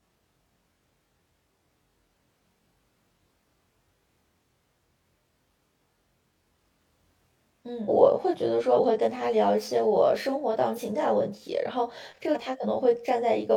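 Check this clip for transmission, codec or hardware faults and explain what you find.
Two problems stand out in this speech clip, one running the whole way through and one that keeps popping up in the second half.

Channel delay (comb filtering) colours the entire clip. One side arrives roughly 20 ms behind the other, and once they're folded to mono the shared content cancels at evenly spaced frequencies, the lowest notch somewhere around 20 Hz. That leaves the voice sounding rough and slightly doubled throughout.

Damaged data in a compressed stream shows up four times: 7.85–7.90 s, 8.73–8.80 s, 10.73–10.80 s and 12.31–12.38 s. Each is a short burst of corrupted frames that the decoder misreads before resyncing on the next header, so you get a brief glitch in the sound.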